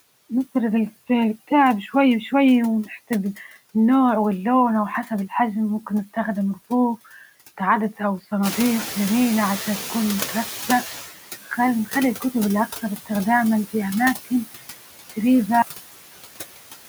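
Noise suppressor artifacts run through the whole recording of speech. The suppressor estimates the steady background noise and lowers those frequency bands frame by frame, here by about 16 dB. The noise floor dips in the gaps between phrases and comes back up beneath the speech.

Around 8.5 s the room noise rises by about 14 dB. That background is part of the recording and ends up about 11 dB below the speech. The fault is the noise suppressor catching up, from 8.42 to 11.05 s. Its noise estimate lags the sudden rise. At first the louder noise passes with only about 12 dB of reduction. Over roughly 2.6 s the estimate adapts, and the noise gradually sinks back down.

At 15.62 s there is a cut-off end. The final stretch of audio was never written or played out. The sound stops abruptly in the middle, with no natural decay or fade. It drops straight to digital silence, which lasts to the end of the clip. 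The cut is instant rather than a tail dying away, so the ending sounds chopped off.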